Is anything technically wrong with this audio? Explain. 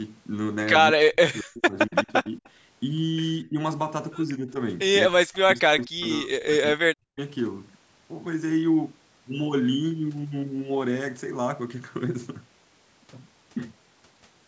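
Yes. Speech suppressed in double talk: the speech dips and breaks up at 0.95–2.43 s, 3.44–3.58 s, 4.38–4.55 s and 5.06–7.19 s, by up to about 40 dB. This is likely an echo canceller turning everything down while both sides talked at once.

Echo leak: from 1.91 to 2.49 s, a faint copy of the speech trails 241 ms behind, about 35 dB below it. This is likely loudspeaker echo that the canceller failed to remove and sent back.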